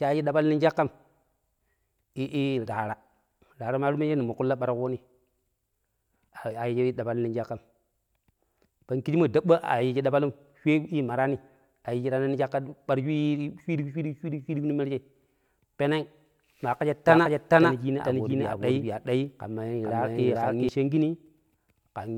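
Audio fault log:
17.07–20.69 s, doubled audio track: for about three and a half seconds the speech suddenly has a second full-band copy riding roughly 400 ms behind it, at about the same level as the original, so every syllable comes back like a hard slapback. There's no decay or room sound on the copy, and it cuts in and out abruptly. It's likely a second capture of the same feed through a slower path, or an edit leaving two copies overlapped out of step.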